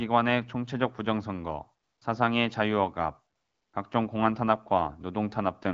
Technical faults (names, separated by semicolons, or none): AMR comfort noise